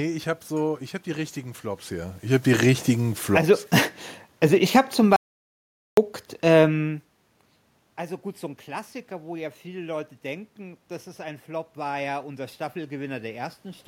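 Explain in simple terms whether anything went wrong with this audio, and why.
Two things went wrong. The first is automatic gain falling. From about 2.24 s to 7.01 s the recording level drifts steadily downward, so the speech and the room noise behind it sink together rather than the voice alone fading. That shared drop is the giveaway: the automatic gain control judged the input too loud or too noisy and slowly turned itself down. It is different from the talker simply moving, which shifts only the voice, as happens near 1.5 s and 7.0 s.

The second is an audio dropout to silence. At 5.16 s the sound stops dead and stays completely silent until 5.97 s, a gap of about 0.81 s. Even the background room noise disappears, which means the microphone signal itself vanished rather than the speech just pausing. The likely cause is a brief loss of input, such as a connection drop or momentary mute, while the recorder kept writing blank audio. 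Anything said during that gap is lost.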